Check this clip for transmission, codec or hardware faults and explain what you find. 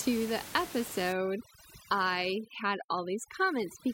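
One processing fault is audible: overdone noise removal from 1.12 s to the end of the speech clip. Before that point the room noise sits about 13 dB below the speech. From 1.12 s a noise reducer set far too aggressively cuts individual frequency bands down or out whenever their level falls near its noise estimate. Quieter speech components are removed along with the noise, so the background drops and breaks up into twinkling specks.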